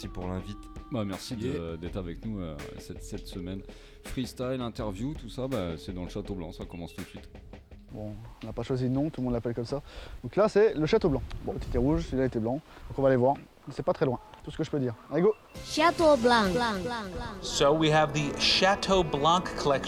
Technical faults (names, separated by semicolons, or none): none